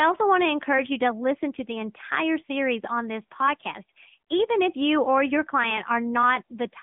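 Across the whole speech clip the sound is thin, boxed-in and clearly buzzy, with nothing above 3.7 kHz and a telephone-like band of about 150 Hz to 3.5 kHz, the plainly audible signature of the AMR narrowband mobile codec (AMR-NB), whose coarse vocal-tract modelling fits a mid-rate mode near 10 kbps.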